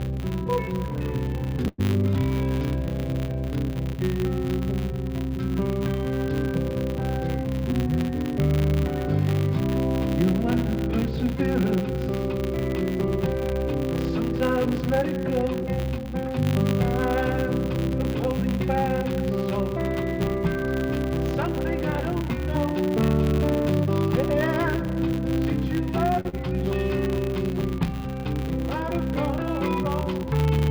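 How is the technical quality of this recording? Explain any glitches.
The recording carries a constant buzz and four timing glitches. It came over a call link using the G.722 wideband codec.

Filter restarted on every block, throughout: a filter in the chain loses its memory at each block boundary and starts again from silence. Each restart adds a small transient. They arrive 100 times a second, which fits 10 ms blocks, so they merge into a 100 Hz buzz. The buzz rises and falls with the level of the audio.

Call audio freeze, 1.68 to 1.80 s: the likely cause is packets held up in transit, which drained the jitter buffer. For about 104 ms the receiver carried the last sound forward as a fading buzz or hiss, then resumed where it had stopped. Nothing is lost, but a short gap is inserted, and everything after it runs 104 ms later.

Jitter buffer speed-up, 14.81 to 16.80 s: the buffer had built up more delay than it targets. 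The receiver cut it back by removing tiny pitch-period slices again and again, about 70 ms in total. For those two seconds the audio plays roughly 3 percent fast at an unchanged pitch.

Short stall from a late packet, 26.21 to 26.27 s: a packet arrived after its playout time, and the buffer ran dry. The receiver stretched the last sound for 43 ms until the packet came in, then continued from the same place. The result is a sound held a little too long, with a faint buzz or dip.

Short concealed packet loss, 26.29 to 26.35 s: straight after the stall, 40 ms of audio never reached the decoder. The receiver filled 38 ms by extending the preceding sound and then blended back into the real signal. This is heard as a brief smear or wobble.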